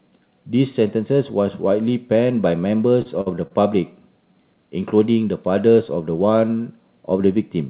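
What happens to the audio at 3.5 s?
From 3.47 to 3.52 s there is a short stall from a late packet. The jitter buffer ran empty, so the receiver stretched the last sound for 29 ms and then resumed where it left off, with nothing lost. It sounds briefly held, with a faint buzz or dip. On a spectrogram the harmonics run flat and repeat, and the waveform shows a looping cycle.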